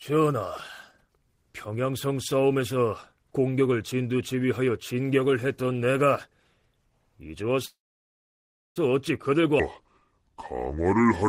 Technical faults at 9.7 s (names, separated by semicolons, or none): section at the wrong speed